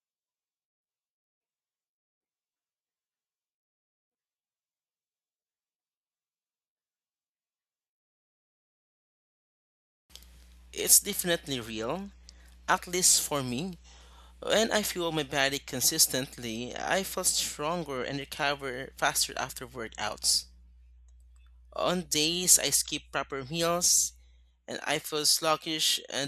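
Nothing stood out as a technical problem on listening to this speech recording.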